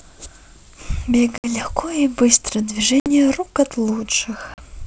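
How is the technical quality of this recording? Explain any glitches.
The recording has three short dropouts from packet loss on an ADPCM call. The underlying wideband coding sounds clear up to about 7 kHz, which fits G.722 at 64 kbit/s.

The holes fall at 1.38 to 1.51 s, 3.00 to 3.08 s and 4.54 to 4.60 s. They remove about 60 ms, 60 ms and 40 ms of speech, or a few packets each time, and the gaps are filled with hard-edged silence. Because ADPCM sends only differences, the decoder's predictor and step size drift away from the sender's during each gap. Speech therefore resumes slightly distorted, and this settles within some tens of milliseconds. That rough recovery is what separates it from a plain dropout, which would come back cleanly.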